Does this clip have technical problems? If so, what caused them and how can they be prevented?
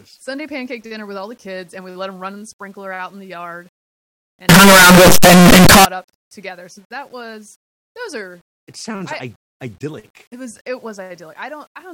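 Yes. From 4.49 to 5.85 s, right before "up together", the speech turns into loud, harsh distortion, with quiet stretches as loud as everything else. The likely cause is a signed and unsigned mix-up on the 8-bit samples: the top bit gets flipped, so every zero crossing jumps across the full range. To prevent it, make sure whatever writes and reads the 8-bit data agrees on whether samples are signed or unsigned.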